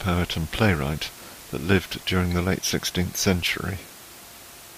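No technical faults are audible in the speech; the only background is the room's own noise, sitting about 19 dB below the voice as part of the recording rather than anything the system introduced.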